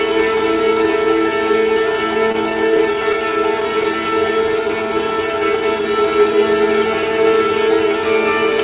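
Between 2.32 and 3.15 s, a handful of brief ticks and smears, none longer than about 20 ms, are scattered short gaps: lost or late packets patched by continuing the last sound. From 4.36 to 4.95 s the sound drags at unchanged pitch, running at 92% speed. This is a jitter buffer slow-down, which repeated tiny pitch periods to add 52 ms of reserve. All of it passes through a band-limited call path with nothing above 4 kHz, which fits a 64 kbps G.711 mu-law codec.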